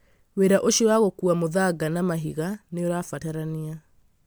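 Throughout the speech there's a swirly, hollow smear with blurred attacks. That's likely generation loss, fitting around four MP3 re-encodes near 135 kbit/s.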